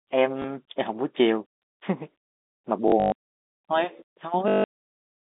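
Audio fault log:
0.42–0.44 s, packet loss with last packet repeated: one 20 ms gap is filled by a replayed chunk, leaving a small blip rather than a silent dropout.
2.88–3.12 s, packet loss with last packet repeated: 160 ms of losses scattered over 240 ms, the longest run 120 ms. Repeated chunks buzz at about 50 Hz, which fits 20 ms packets. The result is a robotic stutter rather than a gap.
4.48–4.64 s, packet loss with last packet repeated: an unbroken 160 ms loss is filled by the same chunk looping. It gives a steady 50 Hz buzz through the telephone-band sound, with no silence as a plain dropout would leave.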